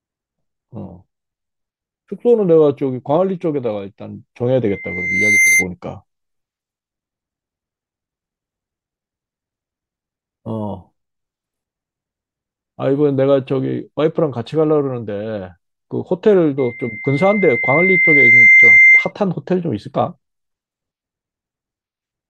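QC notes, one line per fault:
4.68–5.67 s and 16.58–19.12 s: loudspeaker feedback squeal. The mic-speaker loop exceeds unity gain at 2.1 kHz, so the tone swells over the speech, faster and a few dB above it in the first event, slower and about 10 dB above it in the second. On a spectrogram it appears as a bright horizontal line, and on the waveform as a swelling envelope.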